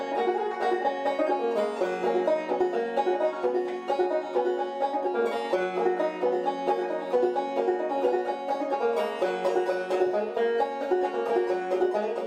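No technical faults can be heard anywhere in this recording. There is nothing in the sound that needs a time mark or an explanation.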